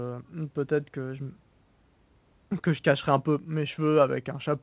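No faults detected in the speech; the mu-law G.711 channel at an 8 kHz sample rate is working normally, with the expected telephone band limit and faint level-tracking quantisation noise.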